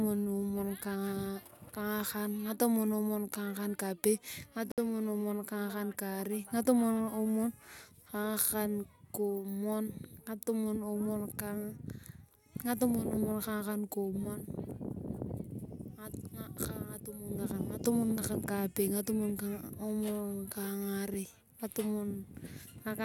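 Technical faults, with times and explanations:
4.72–4.78 s, Bluetooth stall: the speech drops to dead silence for about 62 ms, then carries on from where it cut out. Likely the wireless link got interfered with, packets were held up, and the headphones' buffer ran dry until the resends arrived.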